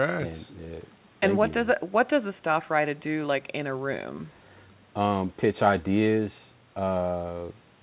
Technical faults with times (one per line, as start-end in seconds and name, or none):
none